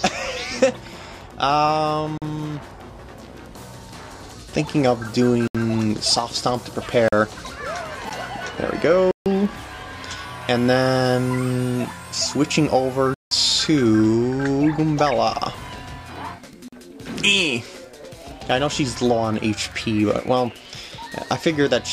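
The audio drops out in seven blocks of digital silence: 2.18–2.22 s, 5.48–5.55 s, 7.08–7.13 s, a 12 ms tick at 8.10 s, 9.11–9.26 s, 13.14–13.31 s and 16.68–16.73 s. The output buffer was likely not filled in time, so zeros went out instead. The repeated 43 ms gaps fit a 2048-sample buffer. Each edge is abrupt. The shortest gap is a tick, and the 148 ms and 171 ms gaps are audible holes.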